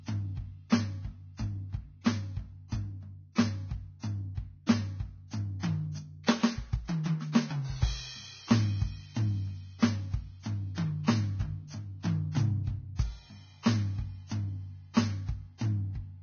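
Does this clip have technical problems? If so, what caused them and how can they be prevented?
Yes. All the way through this music there's nothing above about 6.5 kHz, and what's left of the treble sounds hissy and grainy, with roughened tones and smeared attacks. That's likely heavy Vorbis compression. The encoder keeps a smooth outline of the spectrum but quantises the fine detail so coarsely that it turns into noise, and the damage here fits a bitrate of around 18 kbps. To avoid it, encode at a much higher Vorbis quality setting.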